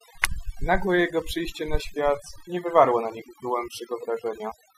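Throughout, the background drops to near silence dotted with twinkling specks. This is overdone noise removal: the noise reduction was set so strong that frequency bands close to its noise estimate were cut away, taking quieter parts of the voice with them.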